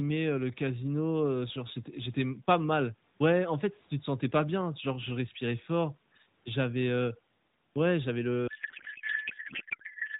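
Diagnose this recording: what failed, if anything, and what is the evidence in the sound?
Codec payload misread at the AMR-NB codec stage: from 8.48 s, after "ouais j'avais", to the end, speech turns to continuous garbled warble as bits land in the wrong fields, unlike packet loss's gaps.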